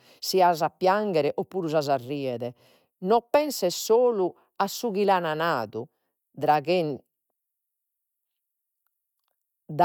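Speech recording; no technical faults audible anywhere in the clip.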